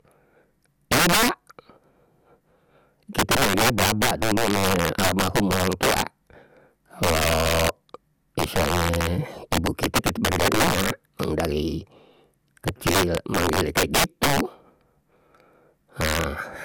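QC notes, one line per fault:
Throughout: integer overflow. The speech is driven about 13 dB past full scale, and a few percent of samples wrap to the opposite extreme instead of flattening. Each loud peak becomes a violent crack rather than the duller buzz of clipping.
Throughout: generation loss. The speech sounds swirly, hollow and smeared, with blurred attacks and nothing above 17.3 kHz. That is worse than one pass would produce, likely from around seven MP2 re-encodes at 128 kbit/s, with each pass adding noise and spectral holes.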